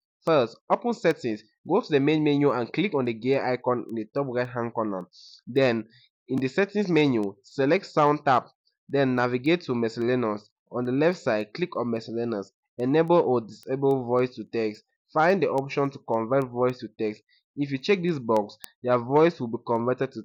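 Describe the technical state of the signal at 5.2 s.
At 5.2 s the audio carries sharp ticks of uneven strength, repeating roughly every third of a second from 0.27 s to 20.04 s. These are word clock ticks: the receiving device runs on its own clock, unlocked from the sender's and drifting by something near 70 parts per million, so each slip drops or repeats a single sample.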